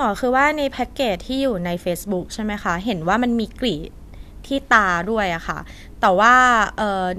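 Nothing goes wrong anywhere in this short bit of speech, so there's no technical fault to point to at any moment.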